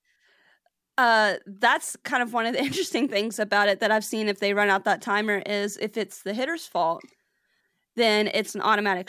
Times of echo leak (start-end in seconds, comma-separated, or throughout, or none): none